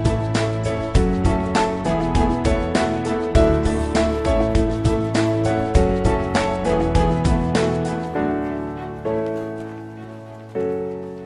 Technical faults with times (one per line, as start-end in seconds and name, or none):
none